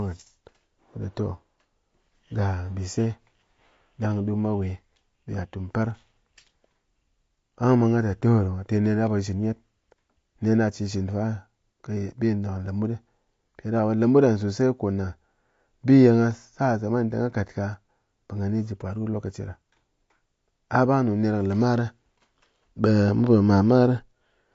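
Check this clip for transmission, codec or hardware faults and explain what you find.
There's one fault, and it runs through the whole clip: AAC compression damage, plainly audible from start to finish. Nothing comes through above about 7.6 kHz, so the speech sounds dull and boxed-in, and the sibilants turn fizzy and smeared instead of crisp. That's likely AAC-LC squeezed to a low bitrate, which fits something around 32 kbps. At that rate the encoder drops the top of the spectrum and quantises what's left coarsely against its hearing model, which leaves that warbly texture.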